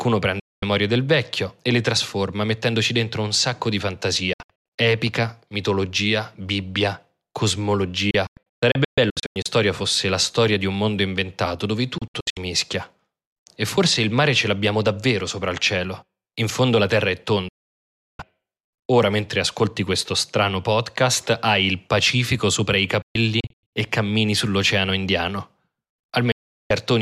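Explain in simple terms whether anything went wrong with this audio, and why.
Yes, there is a digital broadcast dropout. The receiver repeatedly lost the signal or rejected damaged data and muted itself, so the speech cuts abruptly to silence and whatever was said in those gaps is gone. It happens at 0.40–0.63 s (just before "del vecchio e le"), 4.33–4.79 s, 8.11–9.46 s, 11.98–12.37 s (right after "un mondo inventato dove"), 17.48–18.20 s, 23.02–23.73 s (between "sopra i" and "e cammini sull'oceano") and 26.32–26.71 s. Several of these, including the longest, are clusters of short holes rather than one solid gap.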